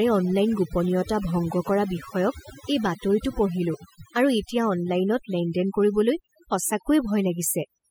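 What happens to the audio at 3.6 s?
At 3.6 s the background is pulled down, with small twinkling specks left in it. This is overdone noise removal, present throughout the clip: noise reduction set too hard shuts down individual frequency bands near its noise estimate, taking quieter parts of the voice along.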